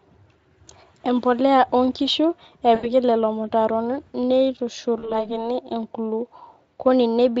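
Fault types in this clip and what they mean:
VoIP packet loss concealment: the decoder bridges missing packets by extending its last pitch and filter, so at 2.75 to 2.89 s and 4.99 to 5.33 s speech smears into a fading buzz and stays weak briefly after recovery, over light Speex coding.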